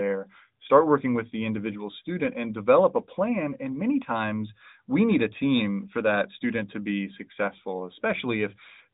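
Nothing stood out as a technical problem on careful listening to this speech recording.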